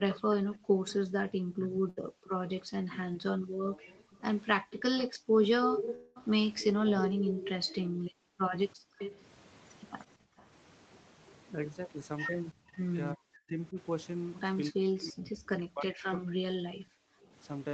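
Right from 0.05 s the speech starts ducking, and that pattern runs to 10.43 s, with around seven seconds of it dipped, thinned or chopped, at worst by something like 40 dB. That's speech suppressed in double talk, likely caused by the echo canceller failing to separate this talker from loudspeaker echo while both sides were talking, so it turned everything down. It returns from 12.53 to 13.77 s and again from 14.71 to 17.33 s, at similar depth.

Riding on top of that early stretch is an echo leak: a delayed ghost copy of the speech coming back about a third of a second late. It shows up at 0.1 to 0.93 s (324 ms behind, roughly 15 dB down), 2.24 to 2.49 s (326 ms, faint, around 25 dB down), 4.70 to 7.52 s (331 ms, and loud, only about 5 dB under the speech), 8.5 to 9.17 s (335 ms, around 10 dB down) and 10.38 to 11.33 s (337 ms, barely there at about 30 dB down). The likely cause is a loudspeaker whose echo canceller let part of the mic pickup through. 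The slow creep in delay from 324 to 337 ms is worth noticing.

At 1.89 to 1.99 s there's a burst of packet loss. About 80 ms never arrived, and the receiver papered over 74 ms of it by stretching the last sound out and fading it. You hear a short held buzz or hiss, then the speech jumps ahead with a sliver gone.

A smaller one, a short concealed packet loss, sits at 3.13 to 3.17 s. Just 20 ms went missing and got filled in from the preceding sound. It comes across as a quick smear or wobble, though a brief consonant there could get swallowed.

The biggest gap is a long network dropout from 5.95 to 6.20 s, likely a stall in delivery. Around 200 ms of audio didn't show up, and the receiver kept extending the last sound for roughly 208 ms as a fading buzz or hiss. It resumes a touch further on, with about 12 ms cut. This lands right inside that strong echo stretch. All of it sits in a band topping out at 8 kHz, which is just the Opus call path at 24 kbps.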